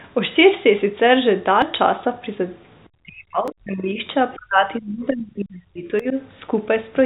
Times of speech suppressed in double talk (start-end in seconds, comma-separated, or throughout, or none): 3.04-4.04, 4.35-6.16